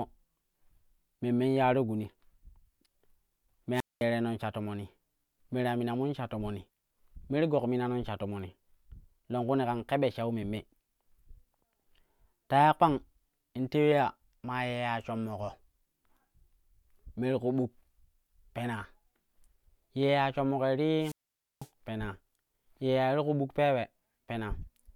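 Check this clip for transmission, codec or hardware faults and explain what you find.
Two wireless microphone squelch dropouts interrupt the speech, at 3.74 to 4.04 s and at 21.00 to 21.69 s. The radio link from an analogue FM microphone weakens until the receiver's squelch mutes its output. Each event is a brief swell of hiss, a hole of near silence (about 210 ms, then about 500 ms), and the speech returning. On a spectrogram, a short broadband noise smear gives way to a blank gap. The waveform shows a flat line there.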